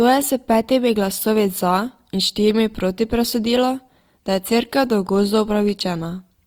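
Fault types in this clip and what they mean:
Opus compression: throughout the clip, the speech sounds plainly grainy and rough rather than swirly. The encoder keeps each band's energy but fills starved bands with folded or noise-like content. Content reaches about 20.4 kHz. This is likely Opus music mode at around 24 kbps.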